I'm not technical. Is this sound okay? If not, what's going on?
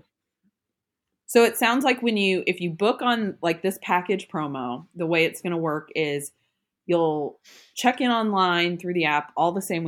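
Yes, this sound is okay, and nothing is going wrong with it.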